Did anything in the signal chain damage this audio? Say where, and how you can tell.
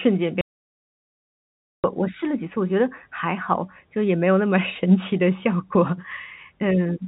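Yes. There's an audio dropout to silence from 0.41 s to 1.84 s, so about 1.43 s of the speech is simply gone. The giveaway is that the gap is silent, with no room tone or hiss underneath, and the sound stops and restarts mid-flow. That points to the input side rather than the codec: most likely the source link or device dropped out while the recorder kept writing silence. The G.711 telephone band, topping out near 3.8 kHz, runs straight through either side of the gap.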